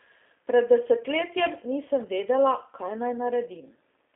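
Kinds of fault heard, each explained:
G.729 codec: speech is rebuilt at 8 kbit/s from a vocal tract filter, pitch predictor and sparse pulses, so it sounds plainly rough and synthetic within a 300 Hz to 3.5 kHz line band. A spectrogram shows nothing above 3.6 kHz and smeared, blocky harmonics.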